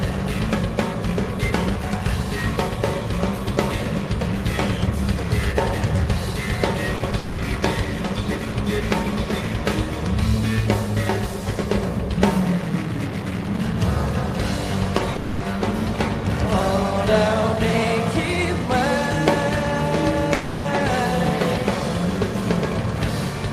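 Around 6.96 s, short concealed packet loss leaves about 40 ms of the sound missing, and again at 7.10 s about 20 ms. The receiver bridges each gap by extending the preceding sound, so you hear a brief smear or wobble rather than a gap. Two more blips, about 20 ms each, come at 14.98 s and 15.12 s. They differ from a dropout in that real audio resumes within a few hundredths of a second.

Each pair of blips runs straight into a longer hole, and a third hole comes later on its own. From 7.18 to 7.40 s, 15.16 to 15.42 s, and 20.34 to 20.66 s, the sound is replaced by a stretched, fading continuation of what came before, likely a long network dropout. Unlike the short losses, these last 0.2 to 0.3 s, and the audio that returns afterwards has skipped ahead. There is no dead silence at any point, because the synthetic fill covers each whole gap.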